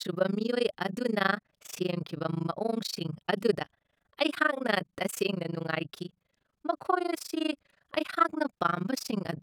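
Overlap-add ripple runs throughout the speech: rejoined frames don't sum to constant gain, so the level dips about 60 dB around 30 times a second. This gives a rough flutter, seen as regular waveform notches and vertical spectrogram stripes.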